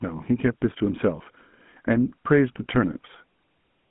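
Across the whole speech clip, the audio has passed through a GSM full-rate codec, consistent with the 13 kbps mobile standard. It rebuilds the vocal tract from coarse, pulse-driven excitation within a line band of 150 Hz to 3.4 kHz, leaving a plainly audible buzzy, gravelly roughness and a thin, boxy tone.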